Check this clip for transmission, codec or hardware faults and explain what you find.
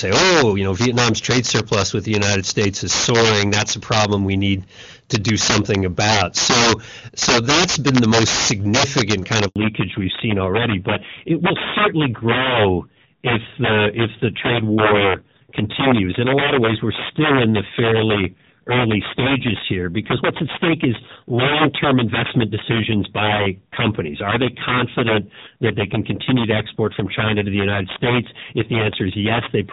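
Three faults are present: integer overflow throughout, a handover gap, and a fall to narrowband from there to the end.

Integer overflow runs through the whole clip. The gain overdrives the signal by about 10 dB. A few percent of samples wrap to the opposite sign instead of limiting, so loud peaks crack.

The handover gap runs from 9.48 to 9.56 s. No frames arrive for 80 ms while the call switches networks. The speech drops out, and whatever was said then is lost.

Fallback to narrowband follows from 9.56 s to the end. Before it, the HD Voice link sounds clean, which fits AMR-WB at 23.85 kbit/s. Afterward nothing passes above 4 kHz, so the speech turns duller and rougher. That fits AMR-NB at 7.4 kbit/s.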